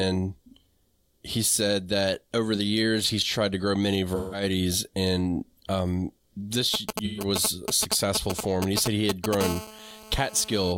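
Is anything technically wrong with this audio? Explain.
Yes. The speech has three kinds of technical fault.

AAC frame loss with concealment occurs at 4.15 to 4.43 s and again at 7.05 to 7.24 s. Lost frames are patched from the previous spectrum, giving brief smeared, noisy gaps of about 171 ms and 128 ms.

GSM signalling bursts run from 6.74 to 9.35 s. A nearby 2G phone's radio pulses are rectified, producing galloping ticks and short 217 Hz buzzes at roughly the level of the speech.

GSM phone buzz follows from 9.41 to 10.73 s. The phone is now in a call, transmitting in bursts 217 times a second, so a steady, raspy 217 Hz buzz sits about 12 dB below the speech.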